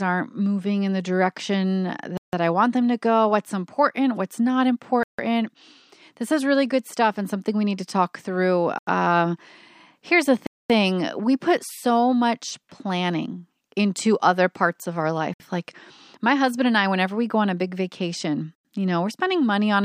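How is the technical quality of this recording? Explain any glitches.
The recording is marred by six short dropouts in the speech, each a clean cut to silence after which the sound resumes. They fall at 2.17 s (about 0.16 s of silence), 5.03 s (0.15 s), 8.78 s (0.09 s), 10.47 s (0.23 s), 15.34 s (0.06 s) and 18.55 s (0.1 s). This pattern is likely a Bluetooth stall: radio interference delayed packets, the receiving buffer emptied, and playback halted until the retransmitted audio arrived.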